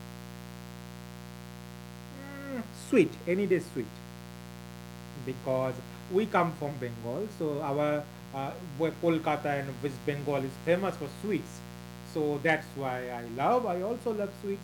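From start to finish the speech sits on a mains buzz at 60 Hz, roughly 15 dB below the signal. Sharp interference spikes, picked up twice per mains cycle, stack harmonics of 60 Hz well into the kilohertz range, giving a constant raspy edge beneath the voice.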